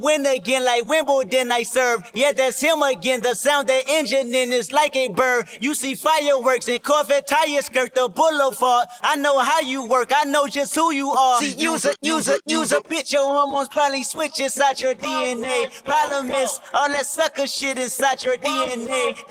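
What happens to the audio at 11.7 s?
Nothing goes wrong at 11.7 s; the audio runs through that moment intact, with no dropout, click, distortion or other fault.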